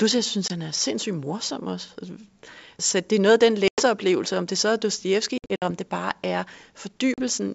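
Packet loss on an ADPCM call cuts hard-edged silent holes into this speech at 0.48 s (20 ms, after "jeg synes"), 3.68 s (100 ms, after "er noget af den"), 5.38 s (160 ms scattered over 240 ms, longest run 60 ms, before "om det bare er") and 7.14 s (40 ms). The missing packets, from one to about seven per event, throw the decoder's adaptive predictor and step size out of step with the sender's. Speech therefore returns slightly distorted, before settling within tens of milliseconds. The underlying G.722 coding stays clear to 7 kHz, which fits its 64 kbit/s mode.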